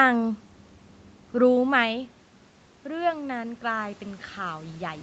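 From 2.86 s to the end, the automatic gain control is rising. The level reaching it fell by about 9 dB, so it began lifting its gain step by step to make up the loss. The whole signal swells gradually rather than jumping: the speech and the room noise beneath it grow louder together over the last two seconds or so. This is not the earlier level shift near 1.5 s, where the talker's distance from the microphone changed.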